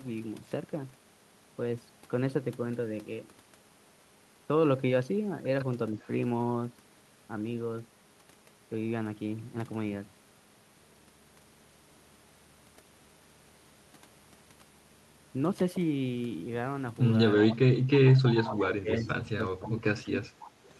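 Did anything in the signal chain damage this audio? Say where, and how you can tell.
Yes. Call processing shows an echo leak. Delayed copies of the speech, 320 ms behind, appear at 5.99, 17.36, 18.15, 18.98 and 20.43 s. The first is very faint. Later ones sit about 20 to 25 dB down. A loudspeaker-side echo canceller is likely passing residue back.

Speech is also suppressed in double talk, again in call processing. From 18.0 to 20.37 s the speech dips in pieces, by about 20 dB at worst, for roughly 1.5 s in total. Echo bursts overlap it. The canceller likely confused talker and echo, ducking both.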